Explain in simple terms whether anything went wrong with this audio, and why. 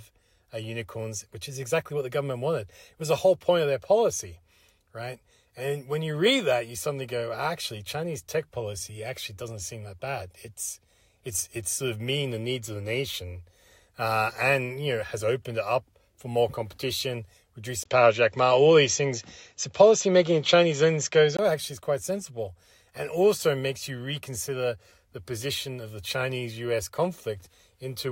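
From 17.84 to 21.39 s the speech suddenly goes duller and changes level a bit, with a tiny gap of about 20 ms at the change and a faint new background noise. Nothing above about 7.6 kHz gets through. That's most likely an input switched to a poorer device.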